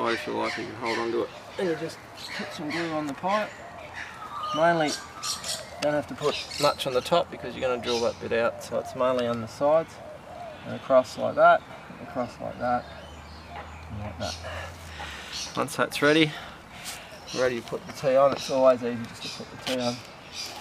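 No technical faults can be heard anywhere in this clip.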